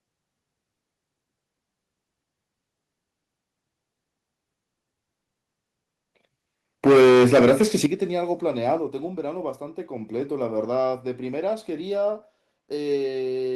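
At 6.86 s the speech hits microphone overload for a full second, until 7.86 s. The loudest peaks run about 11 dB past what the converter can hold, and roughly a third of the samples get their tops sheared flat. That gives the voice a harsh, crackly, buzzy edge through that stretch. The likely cause is an input gain set too high, so the strongest syllables slam into the digital ceiling.

Right on top of that come three microphone volume steps down, heard as sudden drops in level of voice and room together. The first is at 6.87 s, about 3 dB, just as the distortion starts. The big one is at 7.86 s, about 11 dB, exactly where the clipping clears. A last nudge of about 2 dB follows at 8.88 s. It sounds like the call software's automatic gain control likely reacting to the overload and pulling the device input down in stages.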